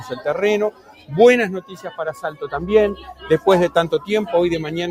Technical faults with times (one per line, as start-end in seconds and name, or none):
0.00-4.90 noise suppressor applied to music or sounds
0.00-0.25 sound cut by the noise suppressor
0.71-1.11 sound cut by the noise suppressor
1.62-2.47 sound cut by the noise suppressor
2.96-3.26 sound cut by the noise suppressor